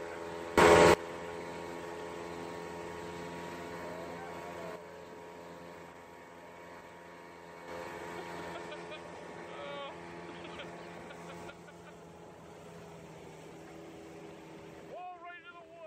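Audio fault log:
0.58–0.94 s, sudden gain jump: a gain setting was likely applied without a ramp, switching level between adjacent samples. The sound and its background noise rise together by about 22 dB, then drop back just as abruptly.
4.76–7.68 s and 11.50–15.86 s, sudden gain jump: the same unramped switch cuts level by about 6 dB, so sound and noise floor fall in step at each onset, the second run lasting to the end.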